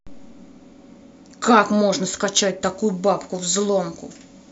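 Speech, with pre-emphasis left on from 2.61 s to the end: an FM 50 µs treble boost, about 10 dB at 10 kHz, goes uncorrected, so it sounds thin, bright and sibilant.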